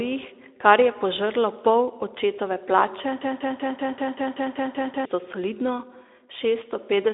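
From 3.21 s to 5.05 s the speech sticks in a broken-record loop. A 192 ms fragment repeats ten times, identically and back to back, and the speech due in that span is lost. The likely cause is a stalled player or stream resending its last fragment.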